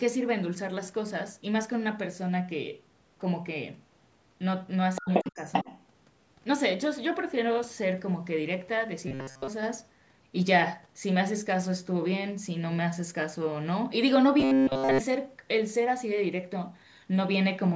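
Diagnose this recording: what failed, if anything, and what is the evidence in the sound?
Other side's voice leaking through at 4.95–5.31 s and 5.53–5.78 s, about as loud as the talker: call processing, likely an echo canceller leaving loudspeaker sound in the microphone.

Speech suppressed in double talk at 5.0–5.42 s and 5.64–5.7 s, dipping up to around 30 dB, likely from the echo canceller turning down both overlapping sides.

Robotic sound from repeated short buffers at 9.08–9.48 s and 14.40–15.01 s: a rigid 133 Hz buzz, likely a driver or buffer stage looping about 7.5 ms of audio.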